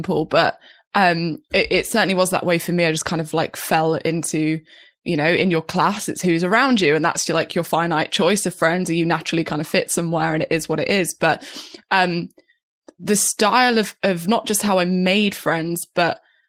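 No technical faults occur anywhere in this speech recording, so there is nothing to describe in time order.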